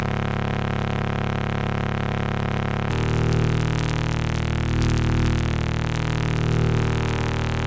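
From start to finish there's gain pumping. The gain dips by roughly 5 dB whenever something loud comes in, which squashes loud and soft together. That's likely a fast limiter clamping down on over-hot microphone gain. The call-style band limit tops out around 8 kHz.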